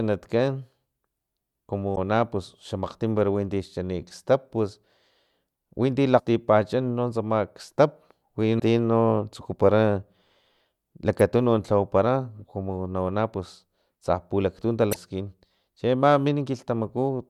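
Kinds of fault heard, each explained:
Damaged data in a compressed stream: corrupted bytes make the decoder misread frames and lose sync until it finds the next valid header, so the speech breaks into brief garbled glitches at 1.92, 6.15, 8.56, 11.19 and 14.90 s, mostly about 50 ms long, the 11.19 s one only a few milliseconds. On a spectrogram each appears as a thin vertical smear of mismatched energy cutting across the speech harmonics; the waveform shows an abrupt discontinuity there.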